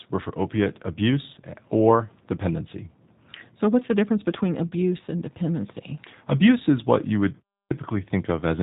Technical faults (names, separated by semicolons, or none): G.729 codec; VoIP packet loss concealed by the speech codec; clipped start after a pause